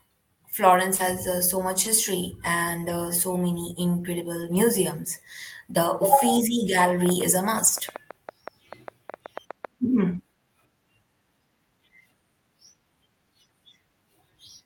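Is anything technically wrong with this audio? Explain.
Yes. Around 0.95 to 1.01 s, short concealed packet loss occurs: about 40 ms of audio arrived too late, and the receiver extended the preceding sound to cover it, leaving a brief smear.

Lost packets rebuilt from error correction appear at 0.99 and 7.67 s. Each 20 ms stretch, consistent with a single lost packet, was replaced by a low-bitrate backup copy, so it sounds rougher and noisier.

From 7.06 to 9.66 s a train of clicks, most likely from interference or a faulty connection, adds roughly twenty irregular pops, about seven per second, peaking somewhat above the speech.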